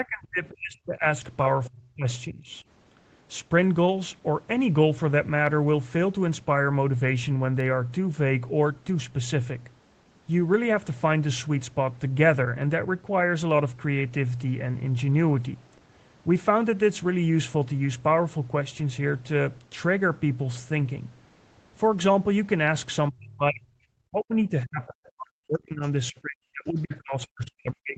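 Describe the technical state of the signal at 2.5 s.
An echo canceller likely mistook the talker for loudspeaker echo during double talk, so speech is suppressed from 2.27 to 2.55 s, dipping by about 15 dB.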